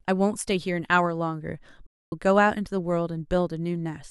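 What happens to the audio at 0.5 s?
Nothing goes wrong at 0.5 s; the speech carries on intact through that moment, with no dropout, click or distortion.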